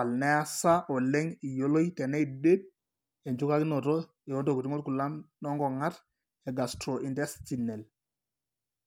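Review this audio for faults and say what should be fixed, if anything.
Nothing needs fixing, because the speech signal keeps continuous timing throughout, with no audible interruption or distortion.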